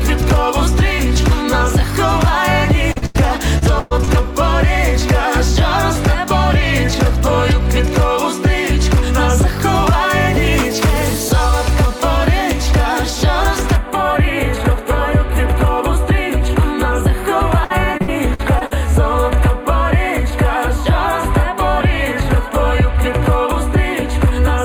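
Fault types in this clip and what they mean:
Repeated packet loss (robotic sound): Packets keep going missing, and each hole gets papered over by stretching out whatever came just before it, so the sound turns choppy. It happens twice: from 2.92 to 4.09 s there are six dropouts, the longest about 111 ms, with roughly 28% of that stretch patched; from 17.64 to 18.73 s another six, the longest about 60 ms, around 22% patched.
Channel delay (comb filtering): From 13.76 s to the end, one channel runs a hair behind the other, about a tenth of a millisecond, which fits a lag of just a few samples. When the two get folded to mono, whatever they share cancels at evenly spaced frequencies, the first dip landing somewhere around 5 kHz. That leaves things sounding hollow and phasey, with fixed notches, for the rest of the clip.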